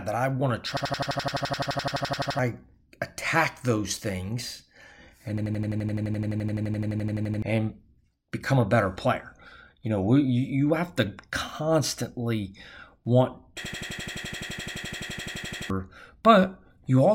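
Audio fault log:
0.77–2.39 s, 5.38–7.42 s and 13.65–15.70 s: system hang loop. The system stalled while playback kept cycling one 85 ms buffer, likely about 4096 samples, so a single slice of speech repeats at 11.7 Hz as a machine-gun stutter, losing roughly 1.5–2 seconds each time.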